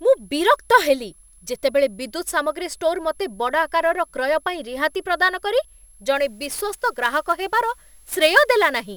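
A switching supply whistle runs through the whole recording: a thin, high tone wandering between about 10.94 and 11.05 kHz, around 35 dB below the speech. A power converter is cycling at an audible rate. The drifting pitch sets it apart from a fixed electrical hum or tone.

From 6.16 s, right after "ପାଇଁ ରିହାତି ପ୍ରଦାନ କରି", to the end, sample clock jitter adds a gritty hiss roughly 25 dB below the speech. The converter's clock wobbles by a few microseconds, so samples are taken at slightly wrong instants. Unlike steady background noise, this roughness swells on loud, bright syllables and disappears in pauses.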